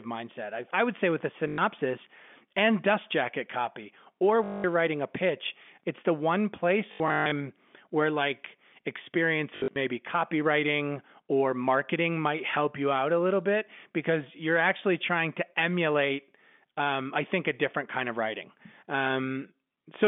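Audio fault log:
1.48–9.76 s, packet loss with last packet repeated: at 1.48–1.58 s after "would say with a", 4.44–4.64 s after "dust jacket copy or", 6.92–7.32 s (broken up, longest gap about 140 ms) after "pitch it's the one", and 9.56–9.76 s (broken up), the last fragment loops instead of falling silent. The loops buzz at 50 Hz, which fits 20 ms packets.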